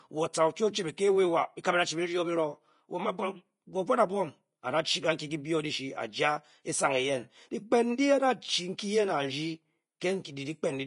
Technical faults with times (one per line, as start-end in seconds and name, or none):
0.00-10.87 Vorbis compression